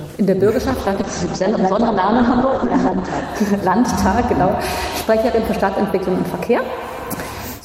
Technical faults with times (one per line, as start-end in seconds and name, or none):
0.70-3.29 call bitrate drop